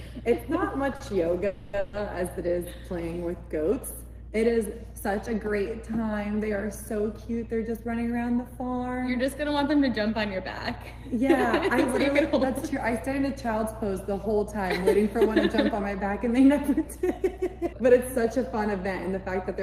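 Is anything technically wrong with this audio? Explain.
Yes. There are three kinds of network-playout fault: a short stall near the start, two call audio freezes right after it, and three stretches of jitter buffer speed-up later on.

The short stall from a late packet runs from 0.96 to 1.02 s. A packet missed its playout slot, the jitter buffer emptied, and the receiver held the last sound for 40 ms until the packet arrived. Playback then resumed at the same point, so nothing is lost, but everything after it is 40 ms later. You hear a brief held sound with a slight buzz or dip. On a spectrogram, the harmonics run flat and unchanging for that sliver of time. The waveform repeats one cycle shape.

The call audio freezes run from 1.46 to 1.75 s and from 1.79 to 1.95 s. Both were likely caused by packets held up in transit, which drained the buffer. The receiver filled 270 ms and then 140 ms by extending the last sound as a fading buzz or hiss. 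It never drops to silence. No audio is missing, but together the freezes add about 410 ms of delay. On a spectrogram, the bands smear horizontally and dim. In the waveform, a periodic envelope decays in place of the natural changes.

The jitter buffer speed-up occurs from 7.78 to 9.09 s at 109% speed, trimming around 150 ms. It recurs from 12.08 to 13.08 s at 104%, trimming about 40 ms, and from 16.13 to 19.61 s at 106%, trimming around 200 ms. The buffer held more audio than its target, so the receiver cut out short pitch-period slices again and again. The pitch stays the same but the timing feels hurried in the first and last stretches. On a spectrogram, events crowd closer together, and the waveform shows small splice points between cycles.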